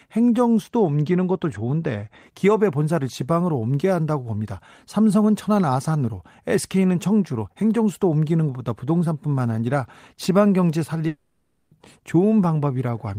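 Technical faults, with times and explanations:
0.63–2.23 s, channel delay (comb filtering): the top end turns dull. One channel lags the other by only a couple of samples, so summing to mono cancels shared content at evenly spaced notches, the first around 10 kHz.
11.07–11.73 s, long network dropout: the last sound smears into a fading buzz for 0.64 s, then drops briefly to silence before audio resumes with that stretch gone. The likely cause is lost audio that the receiver concealed by extending what it last had.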